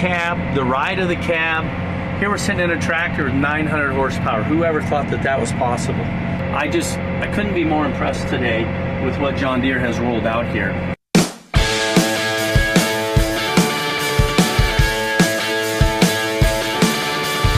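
From 8.11 s to 11.83 s the sound turns coarse, losing detail, with a rough, watery or muffled quality, before clearing again for the remainder of the clip. This is a call bitrate drop: the connection's bandwidth estimate fell and the encoder was forced to spend far fewer bits, which fits a fall from about 128 kbps to about 19 kbps, held at the low point for roughly 3.7 s. With so few bits the codec quantises more crudely and trims the upper frequencies.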